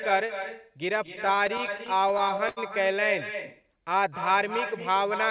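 Echo with no canceller runs throughout. The far end's loudspeaker feeds its unprocessed microphone, so the talker's voice returns about 8 dB quieter after roughly a fifth of a second, visible as a quieter, smeared duplicate trailing each spectrogram burst. From 0.96 to 2.59 s, repeated stalls (stutter) chop the audio. The jitter buffer kept running dry, and the receiver stretched the last sound across many brief gaps up to 78 ms, filling about 225 ms in total. The waveform shows repeated, flattened, looping patches that drag the sound. From 3.63 to 4.37 s, a jitter buffer slow-down plays the audio at 93% speed with unchanged pitch, adding 56 ms. Repeated pitch periods appear as evenly stretched harmonic bands on the spectrogram.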